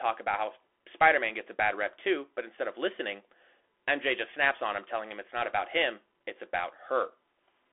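Throughout the whole clip, the speech has passed through a Bluetooth CVSD headset codec. Each sample is coded as a single up-or-down bit with an adapting step, which fits a 64 kbps link, and the channel is confined to a telephone band of roughly 300 Hz to 3.4 kHz, with nothing above 3.8 kHz. The result is thin, boxy speech. Fast, loud high sounds outrun the step size and distort, s sounds turn scratchy, and a granular hiss sits beneath the voice.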